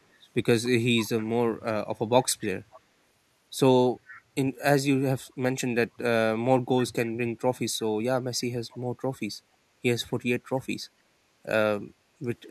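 An echo canceller at the loudspeaker end likely let part of its microphone pickup through, producing echo leak at 2.71–2.8, 4.1–4.22, 8.7–8.78 and 9.13–9.18 s. Short scraps of the speech return 274 ms late, faint, roughly 20 to 35 dB down.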